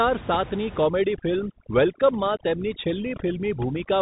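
From the very start, the whole clip is squeezed through a Bluetooth CVSD headset codec. That's the narrowband headset link that encodes each sample as a single up-or-down bit with an adaptive step, and the grainy character fits the 64 kbps CVSD stream. Nothing above about 3.8 kHz makes it through, so the speech sounds boxy and phone-like. The damage is plainly audible: s sounds come out scratchy, louder bright moments smear where the step can't keep up, and a fine granular hiss sits underneath.

Then, from 0.84 s to the end, overdone noise removal kicks in on top of that. The room noise, which was sitting about 15 dB under the speech, gets hammered away band by band, leaving a lowered background broken into little twinkling specks. Quieter parts of the speech get caught as if they were noise.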